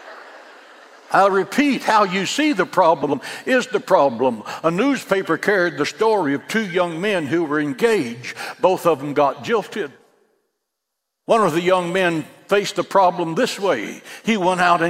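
The audio has a frames out of order fault between 3.03 s and 3.14 s. Two adjacent blocks, each about 52.2 ms long, play in swapped sequence, so the later material is heard before the earlier material it should follow. The result is a brief garbled flutter. The pattern fits two-frame runs reordered in transit and decoded as received. No time is lost overall.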